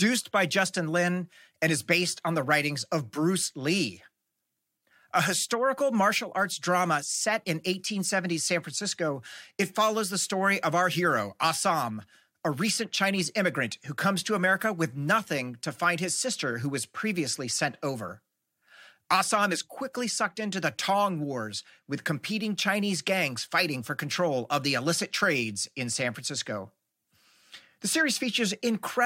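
No technical faults can be heard anywhere here.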